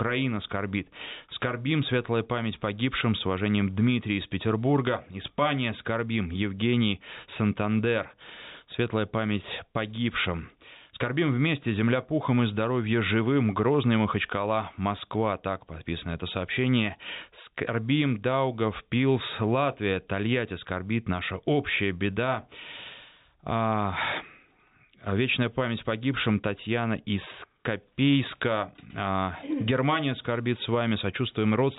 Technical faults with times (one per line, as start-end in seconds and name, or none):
none